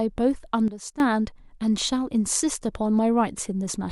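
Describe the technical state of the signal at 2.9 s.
At 2.9 s the speech signal is intact, with no audible technical fault at that moment.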